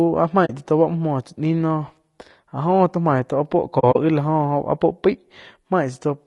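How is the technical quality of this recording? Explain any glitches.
The technical quality is poor, with audible coding damage throughout and two muted gaps.

Low-delay AAC compression, likely AAC-ELD at a bitrate around 32 kbps, runs throughout: short frames resolve harmonics poorly, leaving the speech rough and grainy with a lowered or synthetic top band.

AAC frame loss with muting occurs at 0.45–0.50 s, just before "tsá to", and at 3.79–3.96 s. Lost frames are zeroed and overlapping windows fade the edges, giving soft holes. The second event is several brief dropouts of around 40 ms at most.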